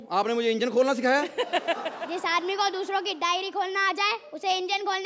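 Nothing stood out on listening; the sound carries the ordinary character of a call's microphone processing, with nothing above 8 kHz and the lowest bass trimmed away as that processing normally does.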